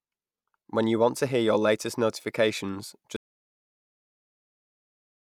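The audio input was likely lost partway through, through a disconnected device, a broken link or an unintended mute, while the recorder kept writing silence. In this speech recording, that audio dropout to silence begins at 3.16 s and runs to the end of the clip at 5.30 s. The speech cuts off mid-flow into complete silence with no room tone at all, and whatever was said during those final two seconds is gone.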